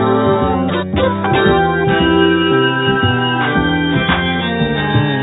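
No faults to report: the music runs without any audible technical defect.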